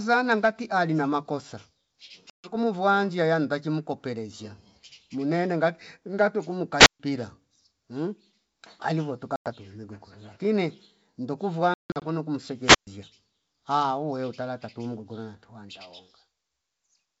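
Packet loss on an ADPCM call shows up first at 2.30 to 2.56 s, where about 140 ms drops out, roughly seven packets, which fits 20 ms packets. The decoder's predictor and step size lose track of the sender's, so after each hard-edged gap the speech comes back slightly distorted before settling. At 6.78 to 7.00 s there's a wireless microphone squelch dropout: the FM signal fades, hiss rises, and the receiver mutes for about 137 ms before the speech returns. More ADPCM packet loss follows at 9.36 to 9.48 s, a 100 ms hole. At 11.74 to 12.03 s there's a messier burst, with 220 ms lost in pieces over about 280 ms and a longest gap of 160 ms. A second squelch dropout comes at 12.60 to 12.87 s, muting for about 126 ms. Behind all of this, the G.722 wideband coding stays clear.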